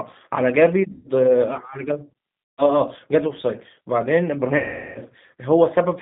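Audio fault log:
Throughout: G.729 codec. The speech is confined to roughly 150 Hz to 3.7 kHz and has a rough, slightly synthetic texture, which fits 8 kbit/s G.729A. Each short frame is rebuilt from a vocal tract filter, a pitch predictor and a few pulses rather than the actual waveform, so the damage is plainly audible.
0.92–1.08 s, 2.54–2.72 s, 4.57–4.98 s: VoIP packet loss concealed by the speech codec. Gaps of about 130, 140 and 380 ms are filled by the decoder extending its last pitch and filter with falling gain. This produces a buzzy tone or coloured noise that fades, longest at 4.57 s, and the voice stays weakened briefly after each gap because every frame is built on the previous one.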